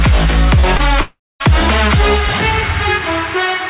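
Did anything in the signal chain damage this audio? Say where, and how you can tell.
Yes. Short concealed packet loss at 0.60–0.65 s and 0.77–0.81 s: the network dropped about 20 ms each time, and the decoder papered over each gap with continued sound, leaving brief smears.

Long network dropout at 1.01–1.42 s: the last sound stretches into a fading buzz, then about 0.22 s of silence, and the audio resumes with roughly 0.4 s gone, likely from a network outage. The call path's 4 kHz ceiling can be heard alongside.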